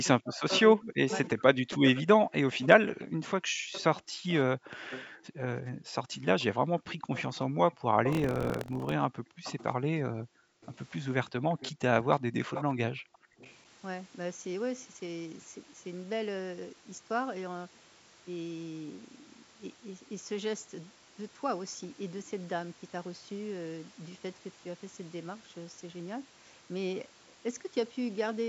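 From 0.02 to 5.54 s the speech dips and breaks up in pieces, as deep as about 40 dB and totalling roughly two seconds. This is speech suppressed in double talk, likely from an echo canceller that could not tell the near talker from loudspeaker echo and turned both down. Unlike a network dropout, the gaps follow the overlap of the two sides.

Starting at 0.55 s and lasting until 13.54 s, a second copy of the speech trails by 345 ms at about 15 dB below it. This is an echo leak, likely residue the far end's canceller failed to remove. It differs from room reverberation because it arrives as a distinct, delayed repeat and not as a smooth tail.

The room sound drops by about 40 dB from 3.50 to 3.66 s. It falls again across 5.51 to 11.60 s, for about three seconds in total, and once more from 13.28 to 13.38 s at about 39 dB. This is background gated by the echo canceller, which clamps the microphone while the loudspeaker plays. 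Only the ambience vanishes, and it returns when the canceller releases.

From 8.10 to 8.93 s a robotic buzz at 43.1 Hz rides on the signal. This is buffer tearing, which fits a 1024-sample buffer. Each period carries a small slice of audio from about 70 ms earlier, joined hard on both sides. The buzz keeps a fixed rate rather than the irregular pattern of random clicks.

Between 12.21 and 13.00 s the speech is suppressed in double talk again, more briefly: about 150 ms in total, dropping about 20 dB.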